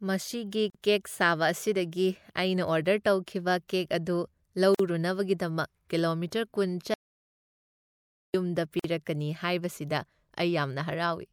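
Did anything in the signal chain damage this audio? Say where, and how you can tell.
Yes. There's a gap at each join of encoded pieces, a codec-stage fault: short silences at 0.70 to 0.75 s, 4.75 to 4.79 s and 8.79 to 8.84 s, about 45 to 49 ms each, every 4 s. Separately encoded chunks were spliced without trimming encoder delay and padding, so the sound drops out briefly, with softened edges, and resumes where it left off.

There's also an audio dropout to silence from 6.94 to 8.34 s, 1.4 s of silence with no room tone. That points to input loss upstream of the recorder, likely a dropped device or link, while silence kept getting written.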